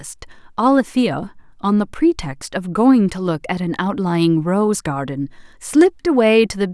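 No technical faults can be heard anywhere in this recording.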